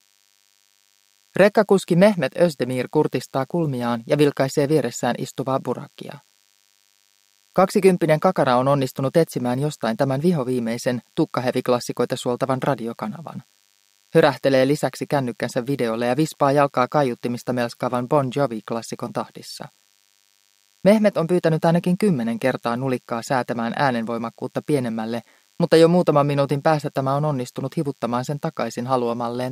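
A thin, steady buzz runs under the sound from start to finish, pitched at 100 Hz but edgy and rasping because it carries a dense stack of harmonics. It sits low, roughly 40 dB beneath the main signal. This is DECT cordless phone buzz: a nearby DECT handset or base station transmits a brief radio burst every 10 ms, and the audio circuitry rectifies those bursts into an audible 100 Hz pulse train.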